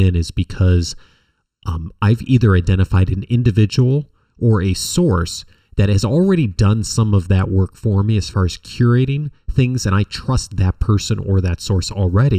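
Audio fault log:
Throughout, channel delay (comb filtering): one side of the speech arrives a little under a millisecond behind the other, and once the two are folded to mono, anything they share cancels at regularly spaced frequencies, with the first dip around 700 Hz and further dips repeating up the spectrum at roughly twice that interval. Those fixed notches carve holes through the voice's body and presence, which is why it comes across hollow and phasey the whole way.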